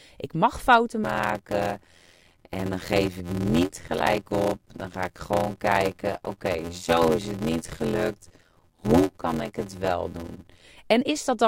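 From 1.03 s, just after "ik mag fouten", until 10.63 s, the speech carries a steady 86.1 Hz buzz and runs at 0.625 times normal speed. This is a block size mismatch (padded): shorter written blocks are zero-filled up to a longer read, which fits a 512-sample block.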